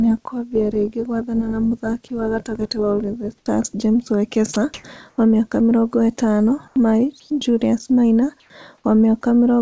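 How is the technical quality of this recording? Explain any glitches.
Several short glitches appear in the pauses, and one brief dropout cuts into the speech. The audio carries no content above 8 kHz, which fits a wideband call codec.

Comfort noise in place of the background occurs six times: 3.38 to 3.46, 4.74 to 4.84, 5.10 to 5.18, 6.68 to 6.76, 7.20 to 7.30 and 8.40 to 8.50 s. Each patch lasts 80 to 100 ms. The real room tone gives way to a flat, featureless hiss. The likely cause is discontinuous transmission: the sender goes quiet in pauses and the receiver synthesises noise. Levels shift by about 11 dB louder at 4.74 s, and by about 6 dB quieter at 8.40 s.

Sound dropped by the voice detector occurs once, at 4.54 s. About 20 ms of speech vanishes. The detector likely misjudged the sound as background and stopped sending. The receiver then filled the gap with comfort noise. It is heard as a tiny clipped moment in the speech.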